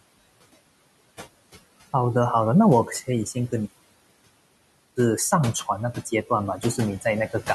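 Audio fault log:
throughout: noise suppressor artifacts. Bands taken for steady noise are cut by about 20 dB frame by frame, so the room noise, about 18 dB below the speech, dips in pauses and rises under speech.
3.65–4.97 s: playback stall. The player likely ran out of data or had its thread blocked, so the speech stops mid-flow for 1.3 s of silence before sound returns.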